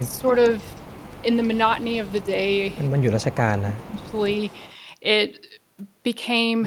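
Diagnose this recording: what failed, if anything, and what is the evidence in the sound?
Echo leak at 0.05–1.57, 1.79–1.84, 2.02–2.25, 2.45–3.36 and 3.57–4.75 s: a faint copy trails the speech by 312 ms, about 20–35 dB down. This is likely echo that the call-processing canceller missed.

Speech suppressed in double talk at 0.02–0.25, 2.23–2.29 and 3.65–4.14 s: the speech dips by about 10–15 dB, likely because the echo canceller could not separate its own talker from the loudspeaker echo and turned both down during overlapping talk.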